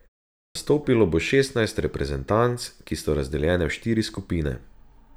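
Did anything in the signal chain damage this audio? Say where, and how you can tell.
Yes, a clipped start after a pause at 0.42 s: the playback device slept through the opening silence, swallowing about 133 ms before "bo šestnajst reprezentanc ki" begins abruptly.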